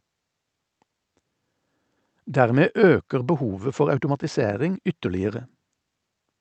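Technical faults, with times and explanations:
No technical faults can be heard in this speech recording. It has passed through a WebRTC call path, whose Opus coding leaves the top of the spectrum stopping at about 8 kHz, with the coding texture such a link normally adds.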